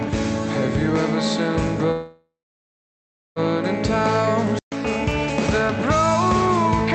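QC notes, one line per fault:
1.91 to 3.39 s, call audio freeze: the sound stretches into a fading buzz, then about 1.04 s of silence, before resuming where it stopped. Delayed packets likely drained the jitter buffer. About 1.45 s was inserted, and nothing was lost.
5.11 s, block of digital silence: a 2.67 ms hole of silence, cut in and out with no fade, so it is heard as a tick. The length fits a 128-sample buffer left unfilled in time. The call path runs through Opus, with highs ending near 8 kHz.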